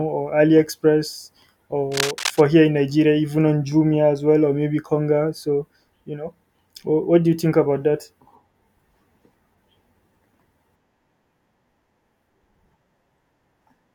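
Speech clip with a patch of cable scratch noise from 1.92 to 2.41 s, right before "here in": a rough rustling burst not far under the voice, likely a worn lead or connector being moved.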